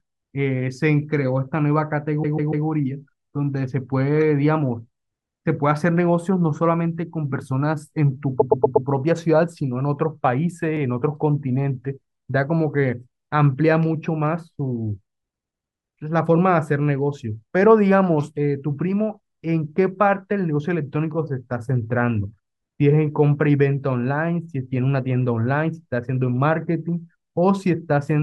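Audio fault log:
2.22 to 2.65 s: repeated frames. A 144 ms block of compressed audio plays four times in a row. The decoder receives the same frames again and plays them again, so the sound stutters. Each restart jumps back to the start of the block. That fits a run of about six 24 ms frames. The clip grows by 432 ms.
8.39 to 8.87 s: repeated frames. A 120 ms block plays five times. The stutter is faster and longer here. The clip grows by 480 ms.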